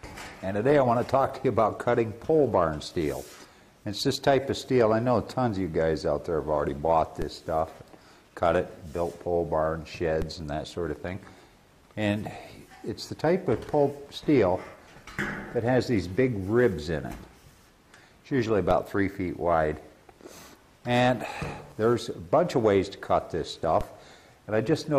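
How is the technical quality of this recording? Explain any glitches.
The recording has one recurring fault: a DC step at 7.22, 10.22, 18.71 and 23.81 s. Each time, the waveform's zero line suddenly jumps by about -19 dBFS, the kind of shift a converter recalibration or a switched-in offset input produces. The offset then drains away as a roughly 20 Hz high-pass filter pulls the baseline back, so each step is heard as a low thump. Unlike a dropout or a sharp digital click, the sound itself carries on unchanged through each event.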